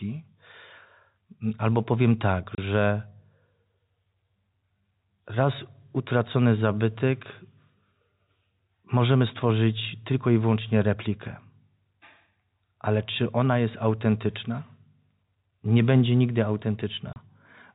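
A speech clip over G.711 telephone coding with two short packet loss holes filled with silence, at 2.55 s just after "albo powiem tak" and at 17.13 s. Each is a 30 ms hard-edged gap, which fits one lost packet.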